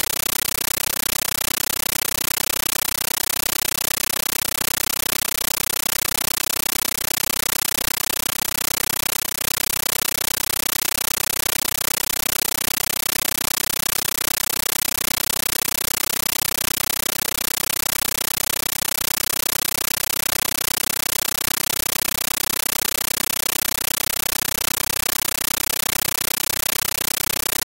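From start to finish, very loud chattering static replaces the speech: 13.3 ms bursts of noise, each followed by a silent gap, repeating 31.25 times a second. This is a compressed stream played as audio. An AC-3 bitstream, consistent with 640 kb/s, was taken as ordinary samples instead of being decoded.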